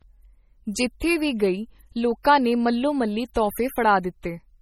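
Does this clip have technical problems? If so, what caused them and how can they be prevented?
Yes. Heavy MP3 compression, likely at a low bitrate around 32 kbps, starved the encoder of bits, so the speech sounds watery and swirly with nothing above 17.9 kHz. Encoding at a higher bitrate or with a lossless format prevents this.

Pre-echo at 4.22 s: the transform codec spread its quantisation noise across a whole block, so a short hiss of about 16 ms precedes a sharp attack and smears it. A higher bitrate or an encoder with shorter blocks on transients avoids it.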